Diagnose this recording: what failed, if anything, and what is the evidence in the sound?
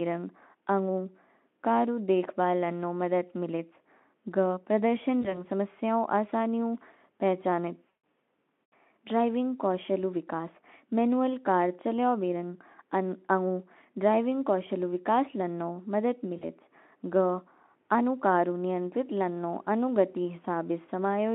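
The network stage failed: VoIP packet loss concealed by the speech codec. Three gaps show it, at 5.21 to 5.44 s, 7.90 to 7.97 s and 16.37 to 16.48 s, matching losses of about 20, 140 and 40 ms of audio. The Speex decoder filled each hole by extending its last pitch and filter, so the speech smears into a buzzy, fading tone. Because each frame builds on the last, weakened, distorted sound lingers briefly after packets resume.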